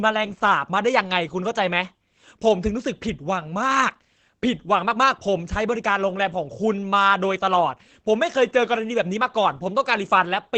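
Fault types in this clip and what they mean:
Opus voice compression: The speech sounds muffled and slightly hoarse, with a slightly robotic edge that stays plainly audible for the whole clip. The fine detail of the voice is being rebuilt from a coarse model rather than carried through. The codec is running in its SILK linear-prediction mode at wideband, working in 20 ms frames. It codes the vocal excitation sparsely, which fits a low bitrate of around 12 kbps.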